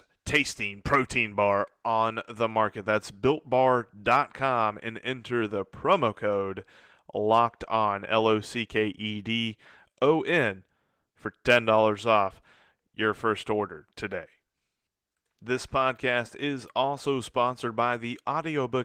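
Nothing here counts as a fault; the speech simply carries the light, expected character of Opus voice compression running in its hybrid mode at 20 kbps with the full band kept.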